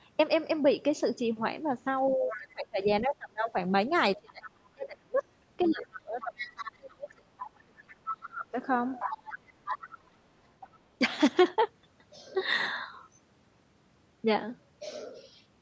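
From 2.16 to 3.56 s, speech is suppressed in double talk, dipping by as much as roughly 30 dB for about a second in total. This is likely an echo canceller ducking the near talker while the far end is active. At 2.28 to 2.53 s, the other side's voice leaks through at about 15 dB below the speech, likely from residual loudspeaker echo. From 4.16 to 8.57 s, suppression returns deeper, about 35 dB, for roughly three seconds in pieces. Leakage is audible at 4.29 to 4.50 s (about 20 dB down), 5.6 to 8.29 s and 9.0 to 10.79 s (both about 10 dB down).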